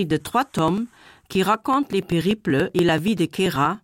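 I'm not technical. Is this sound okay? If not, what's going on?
No, there are periodic USB or driver dropouts: from 0.11 to 3.75 s, a few milliseconds of speech vanish every 0.096 s, causing steady ticking.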